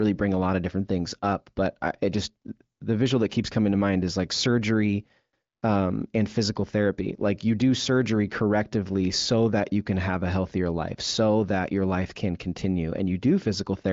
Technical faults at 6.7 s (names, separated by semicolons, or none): none